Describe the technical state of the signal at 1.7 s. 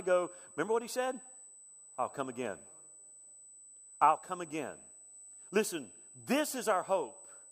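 At 1.7 s the speech carries USB whine, present across the whole clip: current drawn in 125-microsecond USB microframes leaks through power or ground as a steady 8 kHz tone, roughly 20 dB below the speech. A spectrogram shows a thin, unbroken horizontal line at 8 kHz.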